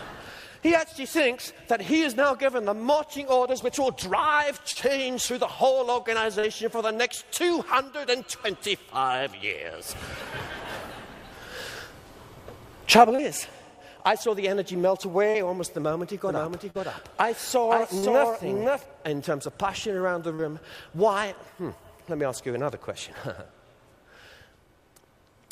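Short concealed packet loss first appears at 4.71 s, then at 6.39, 13.15 and 15.30 s. Each time about 40 ms of audio failed to arrive and the decoder bridged the hole by extending the preceding sound, leaving a brief smear or wobble rather than the silent gap a true dropout would leave.

From 16.27 to 18.85 s a doubled audio track runs. A single full-band copy trails roughly half a second behind at about 5 dB lower, likely from a second, slower capture path. Unlike an echo or reverb, it has no decay tail or room colour, and it cuts in and out abruptly.

During the doubling, two more concealed losses fall at 16.70 and 17.98 s, each again patching roughly 40 ms. A last one lands at 20.34 s with the same short smeared repair.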